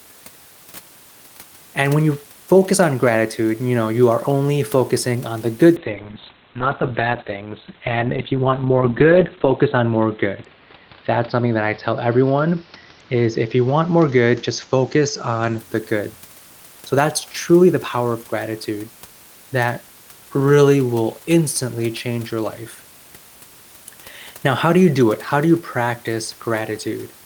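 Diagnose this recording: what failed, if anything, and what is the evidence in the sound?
Call bitrate drop at the codec, 5.77 to 15.64 s. Bitrate falls from 32 to 9 kbps. Coding coarsens and content above 4 kHz disappears.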